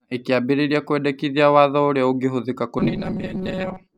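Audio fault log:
2.79 to 3.97 s, robotic sound from repeated short buffers: the last stretch of speech turns into a rigid, metallic buzz pinned at 188 Hz that still roughly tracks the syllables. This is likely caused by new audio arriving too slowly, so the player fills the gaps by looping a fragment of about 5.3 ms, one period of that buzz, while about half the real audio is skipped. The constant repeat rate imposes its own fixed pitch.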